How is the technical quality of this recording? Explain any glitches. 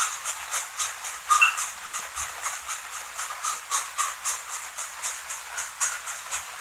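Two network glitches sit close together near the two-second mark, both typical of audio sent over a packet connection.

The first runs from about 1.85 to 1.95 s and is a short stall from a late packet. A packet didn't show up on time, so the jitter buffer ran dry and the receiver kept stretching the last bit of sound for about 80 ms until the data arrived. Then it picked up exactly where it left off, so nothing's actually lost. You hear a sound hanging on a touch too long, maybe with a faint buzz, and everything after it ends up running about 80 ms later than before.

Right after, from about 1.99 to 2.02 s, there's a short concealed packet loss. This time around 20 ms of audio never made it to the decoder. The receiver covered the gap by carrying the previous sound forward for roughly 10 ms and blending back into the real signal. It comes across as a quick smear or wobble, and whatever brief detail fell in that gap is simply gone.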